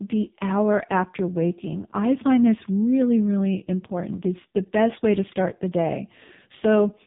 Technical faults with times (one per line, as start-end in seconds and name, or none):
0.00-7.06 AMR narrowband mobile codec